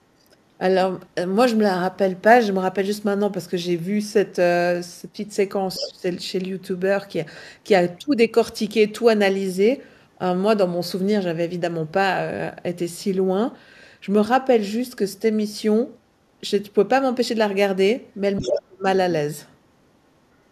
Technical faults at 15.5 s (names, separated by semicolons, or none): none